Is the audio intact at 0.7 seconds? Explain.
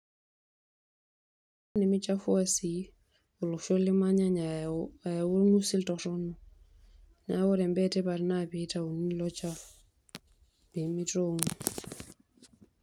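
No. At 0.7 s there is only dead digital silence, which lasts from the start until 1.76 s, when the speech bursts in mid-sound with no natural attack. This is a cut-off start: the recording or stream began late, after the speech was already underway.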